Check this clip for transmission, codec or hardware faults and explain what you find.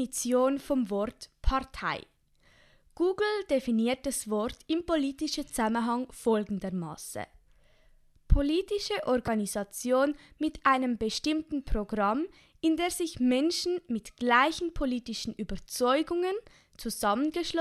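One fault: a corrupt frame decoded in the speech at 9.26 to 9.28 s. For about 26 ms, roughly a couple of compressed frames, the decoder received frames whose bits had been flipped and played them anyway. The misread gains and codes placed energy at frequencies that don't belong to the speech, producing a short chirp, squeak, blip or burst of noise peaking around -20 dBFS. A dropped frame would give a gap or a smeared repeat. This fault instead adds a burst of foreign tone or noise lasting about the length of the damaged frames.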